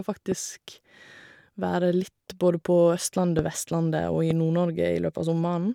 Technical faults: loud pop

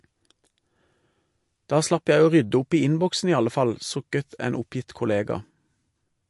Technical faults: MP3 compression

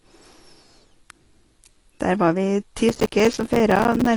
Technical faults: AAC compression; processor overload crackle

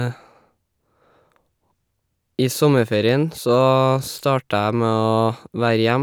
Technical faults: none

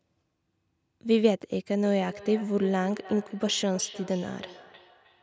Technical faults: feedback echo between two devices

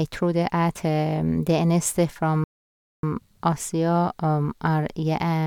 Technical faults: rebuffering stall

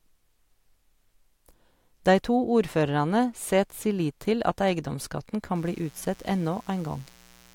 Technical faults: mains buzz

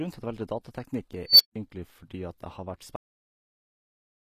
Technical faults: HE-AAC compression; unstable filter; cut-off end

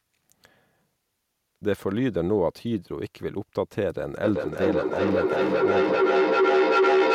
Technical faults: feedback howl

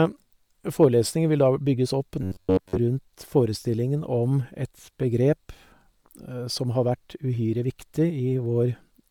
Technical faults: Bluetooth LC3 compression; hard clipping; robotic sound from repeated short buffers

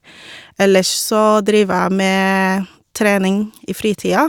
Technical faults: none

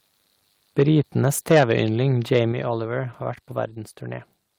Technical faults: microphone overload; microphone volume stepped down

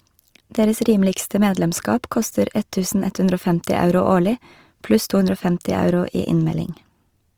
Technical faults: Opus compression

